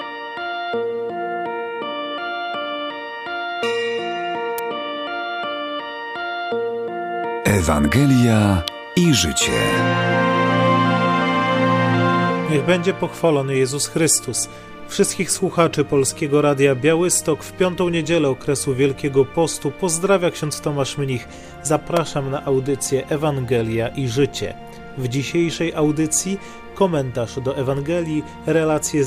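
Electrical switching spikes at 4.58, 8.68 and 21.97 s: each is a sharp snap laid over the sound, peaking around -5 dBFS. The likely cause is a nearby switch, motor or static discharge arcing briefly, with the audio line picking up the burst.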